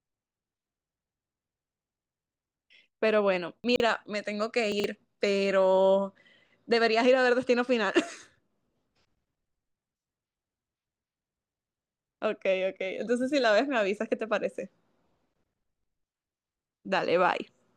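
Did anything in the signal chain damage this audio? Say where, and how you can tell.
Yes, chunks out of order at the buffer stage: from 3.64 to 3.8 s and 4.72 to 4.84 s, 40 ms blocks play three and two chunks late, giving a jumbled stutter. The waveform shows abrupt steps at each join, and the spectrogram shows misordered frames.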